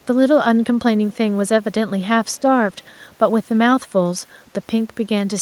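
Echo leak at 0.02 to 0.06 s, 1.1 to 1.17 s and 2.75 to 3.13 s in this speech: faint scraps of the voice return 293 ms late, far below the direct speech, most likely from a far-end loudspeaker whose echo canceller let residual pickup through.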